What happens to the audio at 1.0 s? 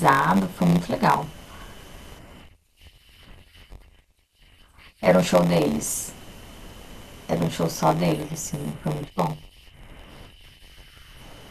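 At 1.0 s the speech carries a steady buzz at about 93.8 Hz and runs slightly slow, at 0.938 times normal speed, with its pitch essentially unchanged. This is a block size mismatch (padded), present throughout the clip. One stage hands over shorter blocks than the next reads, which fits 512-sample reads, and the remainder of each block is filled with zeros. The repeated short gaps produce the buzz and stretch the timing.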